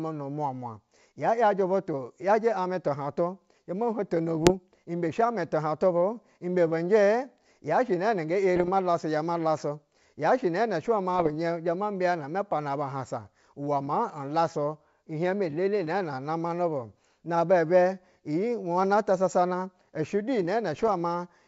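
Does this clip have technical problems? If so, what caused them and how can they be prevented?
Yes, there are four short bursts of bit errors on an ADPCM link, at 4.43 to 4.52 s, 8.56 to 8.70 s, 11.19 to 11.35 s and 20.73 to 20.93 s. Each is a cluster of pops and rough crackle with the level briefly jumping about. A flipped bit knocks the decoder's step size and predictor off track, so the damage rings on for a few milliseconds. The bursts sound like an error rate of roughly half a percent. Around them the G.722 wideband sound comes through cleanly. To prevent this, fix the radio or transmission link so fewer bits are corrupted, or add error protection to the ADPCM stream.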